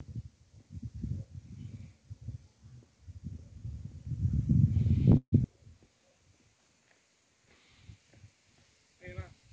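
Packets were likely held up in transit, so the jitter buffer ran dry at 5.17 s, causing a call audio freeze until 5.39 s. The last sound stretches into a fading buzz or hiss for 150 ms, then 80 ms of silence, before the audio resumes exactly where it stopped.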